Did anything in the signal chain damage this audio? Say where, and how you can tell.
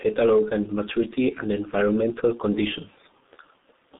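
Yes, at the codec stage: the whole clip passed through G.723.1 at a bitrate that sounds like roughly 6 kbit/s. Its coarse 30 ms frames and slowly updated voice model leave the speech hoarse and muffled, with blurred consonants, confined to about 200 Hz–3.7 kHz and empty above 3.8 kHz.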